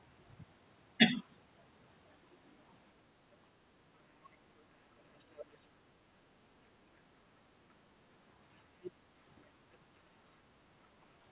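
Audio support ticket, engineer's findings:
Other side's voice leaking through: a second voice sits under the talker at 1.17–1.24 s, 5.19–5.56 s, 8.83–8.91 s and 9.36–9.41 s. It ranges from about 35 dB down to about 15 dB down, at 8.83 s. Likely cause is loudspeaker playback reaching the mic and the echo canceller not fully removing it.

Speech suppressed in double talk: the talker's level dips sharply, roughly 25 to 30 dB at its deepest, at 5.76–6.08 s and 9.78–9.87 s, each shortly after a leakage burst. Likely cause is the echo canceller failing to separate the near talker from the echo while both overlap, so it attenuates both.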